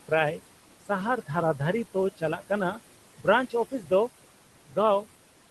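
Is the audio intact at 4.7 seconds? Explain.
No. Speech cut by the noise suppressor, from 4.68 to 4.77 s: the suppressor mistook part of the speech for noise and pulled it down about 14 dB, so that stretch sounds swallowed and faint. Noise suppressor artifacts are also present there, as throughout: the background is held down about 17 dB frame by frame.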